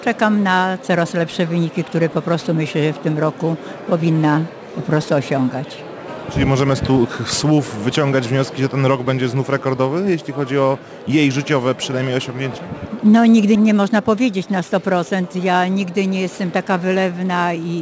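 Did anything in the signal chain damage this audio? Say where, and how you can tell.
Yes, the damage is at the sample-rate conversion stage, and it runs through the whole clip. It's aliasing: the top end has a gritty, metallic edge, with spurious tones that don't track anything musical and energy pressed right up against 8 kHz. That fold point fits a drop from 44.1 kHz to 16 kHz with no anti-alias filter, so everything above 8 kHz reflected back down, sitting roughly 25 dB under the signal.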